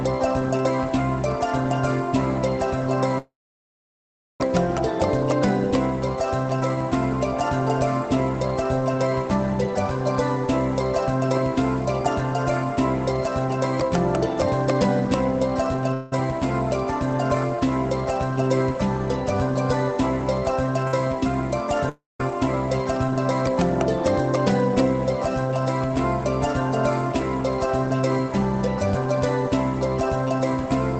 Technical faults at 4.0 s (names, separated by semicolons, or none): call audio freeze